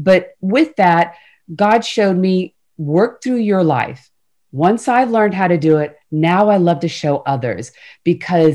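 A speech recording with hard clipping throughout. The signal is driven about 5 dB past what one stage can pass. So the loudest peaks are cut flat. Only a small fraction of samples, well under one percent, hit the ceiling. The flat tops add high harmonics, heard as brief crackle on peaks.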